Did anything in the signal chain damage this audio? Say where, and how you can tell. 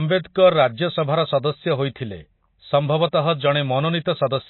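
Yes, and it's in the codec stage, most likely MP3 compression at a low bitrate, something in the region of 24 kbps. The damage is plainly audible from start to finish: nothing survives above about 4.1 kHz, so the speech sounds dull and boxed in, and the s sounds come out watery with a swirly edge. That's the encoder running short of bits, chopping the treble at a fixed point and letting weak frequency lines flicker in and out between frames.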